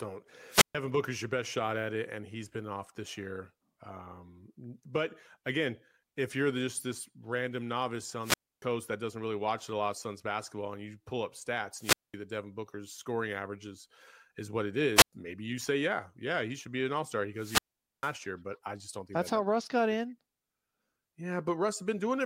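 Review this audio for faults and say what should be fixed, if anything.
Wireless microphone squelch dropout occurs five times: 0.48, 8.21 after "just this random novice", 11.78 after "you pull up stats", 14.95 after "averages is what it", and 17.36 s. Each is a hiss burst, then silence of 0.11 to 0.45 s, as the weak FM signal triggers muting. Improve the radio link with shorter range, clear line of sight or better antenna placement.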